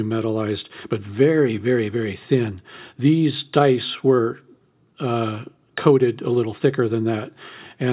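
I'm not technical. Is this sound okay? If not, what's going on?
Yes, this speech sounds fine; nothing is wrong.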